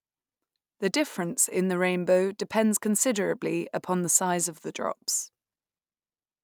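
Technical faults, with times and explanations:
Throughout, resampler restarted on every block: each 10 ms block is converted alone, and its edge errors form a 100 Hz buzz, fitting a 44.1 to 48 kHz conversion.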